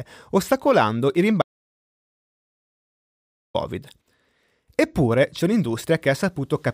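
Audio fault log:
1.42–3.55 s, audio dropout to silence: input likely lost, so silence was written for 2.13 s after "ostacolando il", cutting the speech to dead silence with no room tone.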